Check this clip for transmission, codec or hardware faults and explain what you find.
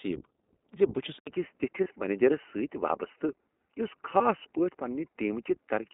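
Yes, there's a fair bit going on here: the whole thing runs through a low-bitrate codec, the input seems to change partway in, and there are two brief dropouts.

The iLBC codec is on the entire clip. It's a narrowband VoIP codec that encodes each short frame independently, so everything sits between about 200 Hz and 3.7 kHz. The damage is plainly audible: the speech sounds a bit rough and synthetic, which fits iLBC's 20 ms mode at about 15.2 kbps.

At 1.19 s there's an 80 ms silence, and from there to the end the top narrows further, with nothing above 3 kHz. The cause is likely the input switched to a poorer device. The sound gets duller and boxier, with a faint new noise floor and roughly the same level.

The lost iLBC frames show up at 1.84 to 1.88 s and 4.18 to 4.22 s, each about 20 ms, which fits a single dropped frame. The decoder fills each gap by repeating the last pitch cycle mixed with noise, giving a short buzzy hold before the speech snaps straight back.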